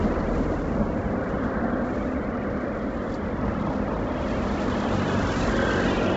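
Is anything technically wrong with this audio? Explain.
Yes. Throughout, the sound cuts off above 7.7 kHz with a grainy, breathy noise-filled top, likely Bluetooth LC3 compression at a low bitrate near 16 kbps in 10 ms frames, unlike a clean low-pass cut.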